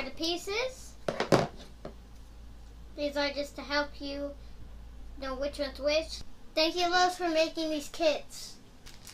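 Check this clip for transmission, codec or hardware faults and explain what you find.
One fault is present: periodic clock jitter from 6.74 s to the end at 9.14 s. The converter clock is wobbling at around 1 kHz, which puts sidebands that far either side of every component and gives a rough, metallic edge. Unlike added hum or noise, it follows the signal, grows on higher content, and disappears in silence.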